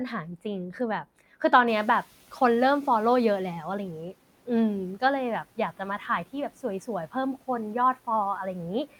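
From 1.67 to 3.85 s the room noise behind the speech, having jumped by about 24 dB at around one and a half seconds, comes through with less reduction at first and then sinks by about 9 dB over roughly 2.2 s. This is the noise suppressor catching up: its estimate of the background was set for the quieter room, so it under-subtracted the louder noise until its estimate adapted over those 2.18 s.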